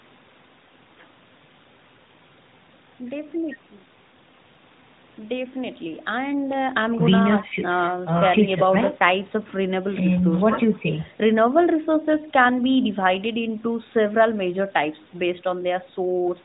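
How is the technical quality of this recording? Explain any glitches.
No glitches turn up here; it's phone-call speech with the usual narrowband AMR mobile codec sound topping out around 4 kHz, and nothing in it calls for any explanation.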